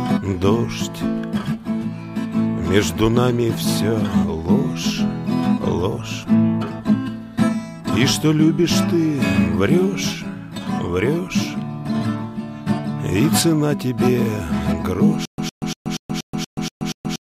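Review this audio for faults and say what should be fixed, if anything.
From 15.25 s to the end of the clip there is a stutter with silent gaps. A burst of about 109 ms plays, then about 129 ms of digital silence, and the same burst returns on a steady cycle of about 238 ms, eight times, until the clip ends at 17.2 s. The likely cause is the player or stream stalling and replaying its last buffered fragment on each retry before running dry, so the audio that should fill this stretch is missing. To prevent it, give the playback path enough buffering and a recovery that resumes with new data rather than repeating stale fragments.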